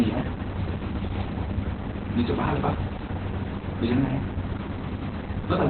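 Speech runs muffled, hoarse and faintly robotic from start to finish, with nothing above 4.4 kHz. This is heavy Opus voice compression: the SILK coder, squeezed to narrowband, codes the excitation coarsely in 20 ms frames, which fits a very low bitrate near 8 kbps.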